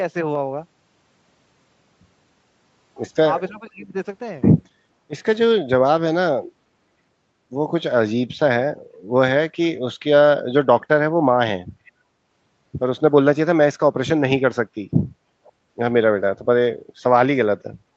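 From 3.51 to 3.95 s the sound dips sharply, by roughly 20 dB at its deepest, and breaks up across about 400 ms in total. This is speech suppressed in double talk. The likely cause is the echo canceller meeting both sides active at once, failing to separate the near talker from loudspeaker echo, and attenuating everything. A shorter, deeper cut of about 30 dB recurs at 16.43 to 16.47 s.

Echo leak appears at 3.82 to 3.87 s, inside the first dip, then at 11.85 to 11.92 s and 15.44 to 15.52 s. Each is a brief, faint delayed copy of the speech trailing about 484 ms behind the original, around 30 to 35 dB below it. These scraps are likely residual loudspeaker pickup that the far end's echo canceller failed to remove and sent back down the line.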